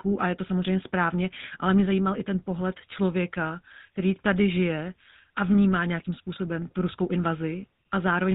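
From start to end, the speech carries GSM full-rate codec damage, and it is plainly audible. The codec models the vocal tract and excites it with sparse, regular pulses. Nothing above 4 kHz survives. The result sounds buzzy and gravelly, which fits a 13 kbps coder.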